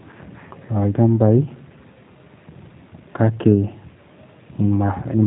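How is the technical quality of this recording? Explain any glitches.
The recording is narrowband and clearly coded, with plainly audible G.729 codec damage running from start to finish rather than isolated glitches.

G.729 codec: throughout the clip, the speech is rebuilt from a vocal tract filter, a pitch predictor and a sparse set of pulses in each 10 ms frame, at a data rate that fits 8 kbit/s. Nothing above 3.8 kHz survives, so sibilants lose their edge and the voice sounds boxed in. The sparse excitation gives a slightly rough, synthetic buzz to voiced sounds.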